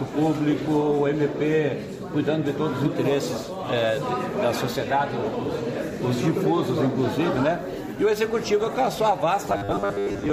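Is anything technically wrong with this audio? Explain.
Yes. From 9.48 s to the end at 10.32 s the sound turns into a rigid, metallic buzz pitched at 100 Hz: robotic sound from repeated short buffers. The likely cause is audio arriving too seldom, so playback fills the gaps by looping the most recent 10 ms block, whose repetition rate sets that fixed 100 Hz tone. About half of what is heard there is repeated material, with the skipped audio lost.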